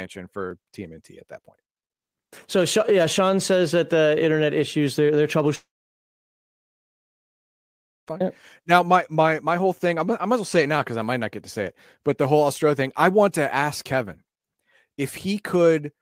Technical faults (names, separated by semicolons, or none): long network dropout